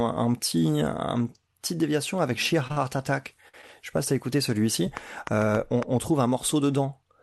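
Short stalls from late packets occur at 2.67 to 2.71 s, 2.72 to 2.77 s and 3.48 to 3.54 s in this speech clip, which came through an Opus call path band-limited to about 12 kHz. Each time a packet arrived late, the jitter buffer ran dry, so the receiver held the current sound for 23, 47 and 49 ms respectively and then resumed where it left off. Nothing is lost, but each of these moments is audibly stretched with a slight buzz or dip. A train of clicks follows from 4.97 to 5.84 s, just before "on trouve un": about five sharp, similar pulses, irregularly spaced at roughly 4.7 per second and standing well above the speech level. They tick over the sound and through the gaps alike. The likely cause is electrical interference or a faulty connection or power supply.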